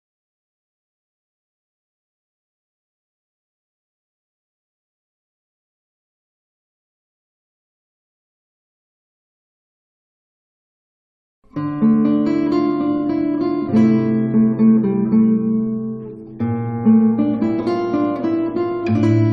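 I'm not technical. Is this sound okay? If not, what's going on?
Yes, this one sounds fine: nothing in it catches the ear as a problem, so there's nothing going on that you need to worry about.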